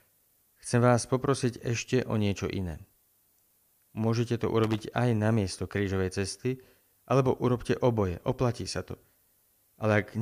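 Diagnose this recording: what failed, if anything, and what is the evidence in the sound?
The sample-format conversion stage reduced the audio to a very short word length, with noise shaping applied to the rounding error. This produces low bit depth with noise shaping. Throughout the speech, a steady, thin hiss sits roughly 35 dB below the signal, climbing steeply toward the top of the band. The amount of hiss fits a 10-bit word length. The shaping filter feeds each rounding error back so that the quantisation noise is pushed out of the midrange and piles up at high frequencies.

The analogue wiring has a loose connector that briefly lost and regained contact. From 4.64 to 4.83 s, just before "aj na miesto", an irregular burst of loose connector crackle breaks into the speech as crackle and scratching. As the worn or dirty contact moves, it rapidly makes and breaks the circuit, chopping the signal into fragments. 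Any DC present on the line turns each break into a click.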